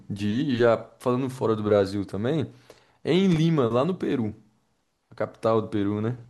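The clip is speech with one fault. A burst of loose connector crackle occurs from 3.32 to 3.37 s. It sounds like brief, irregular scratching. A worn or dirty contact is making and breaking as it moves, chopping the signal into ragged fragments.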